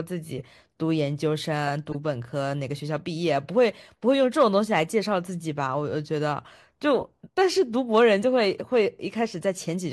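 Corrupt frame decoded, at 0.38 to 0.42 s, 1.90 to 1.95 s and 7.00 to 7.04 s: each time, a short chirp, squeak, blip or burst of misplaced energy cuts across the speech for about 40 to 50 ms, roughly a couple of compressed frames. Flipped bits in those frames were decoded rather than concealed, so wrong gains and misread spectral codes put sound at frequencies where none belonged. Each burst peaks at about -20 dBFS.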